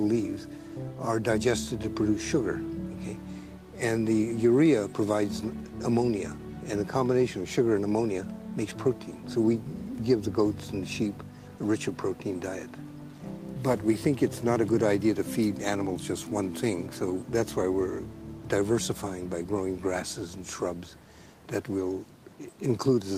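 No technical faults can be heard anywhere in the audio.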